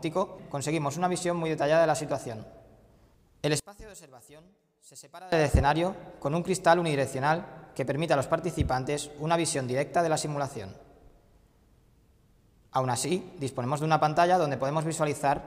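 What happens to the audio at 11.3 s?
Nothing goes wrong at 11.3 s; the audio runs on intact through that moment, with no dropout, click, distortion or other fault to be heard there.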